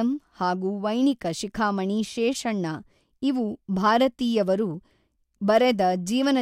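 From 0.21 s to 6.38 s, clock slip clicks tick about ten times a second, likely from unsynchronised clocks roughly 200 ppm apart, appearing as evenly spaced thin vertical spectrogram lines.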